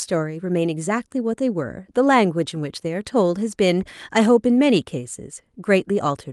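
Nothing in the recording stood out as a technical fault on listening.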